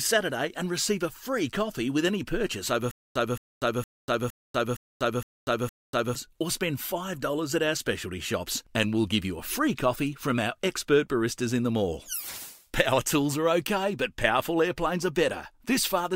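From 2.91 to 6.15 s there's a stutter with silent gaps. A burst of about 220 ms plays, then about 243 ms of dead digital silence, and the same burst comes back seven times at a steady 463 ms rhythm. That's likely the player or stream stalling, replaying its last fragment on each retry and then running dry. Whatever should have played across those three-odd seconds is simply gone.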